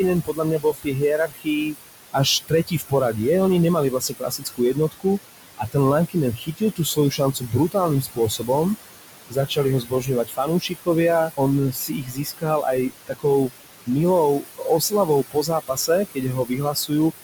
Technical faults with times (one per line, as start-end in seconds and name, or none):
0.00-17.24 noise suppressor artifacts
0.25-3.18 speech cut by the noise suppressor
3.90-8.49 speech cut by the noise suppressor
9.30-17.12 speech cut by the noise suppressor